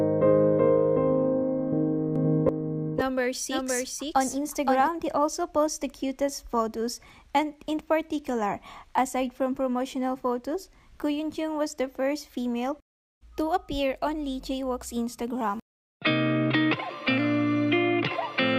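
From 2.16 s to 4.88 s a doubled audio track appears, likely because the sound is captured a second time along a slower path. A full-band copy trails about half a second behind, roughly 5 dB quieter, with no decay or room colour, and it starts and stops abruptly.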